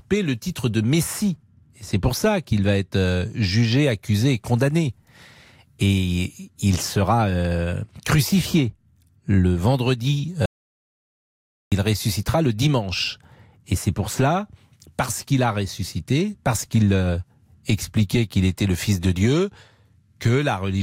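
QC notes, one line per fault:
10.46–11.72 s, audio dropout to silence: right after "euh crucifié le vendredi" the speech cuts out to dead silence for about 1.26 s, no room tone at all, then picks up at "il ressuscitera le dimanche". Likely the input was lost briefly while silence kept getting written.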